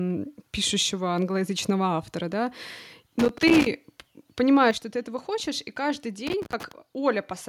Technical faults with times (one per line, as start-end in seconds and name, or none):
3.19-3.66 loose connector crackle
4.71 microphone volume stepped down
6.27-6.72 loose connector crackle